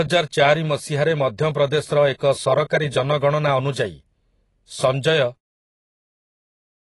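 From start to finish the speech carries plainly audible AAC compression damage, likely from AAC-LC coding at a low bitrate, consistent with roughly 27 kbps. The encoder discards everything above 11.5 kHz, so the sound is dull, and coarse quantisation of the remaining frequency lines smears detail. On a spectrogram this appears as a hard horizontal ceiling at 11.5 kHz. The smooth fade-out near the end, around 5.4 s, tapers the waveform evenly, with no step.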